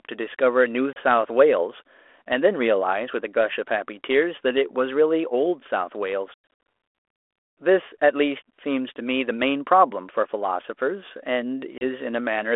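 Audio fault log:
0.93–0.97 s and 11.78–11.83 s, packet loss on an ADPCM call: a hard-edged hole of about 30 ms each, consistent with a few lost packets, then slightly distorted speech as sound resumes.
6.34 s, packet loss on an ADPCM call: 250 ms of scattered dropouts over 340 ms, the longest 100 ms, suggesting dozens of lost packets. The 32 kbit/s G.726 decoder's predictor and step size drift from the sender's, so sound returns slightly distorted before settling.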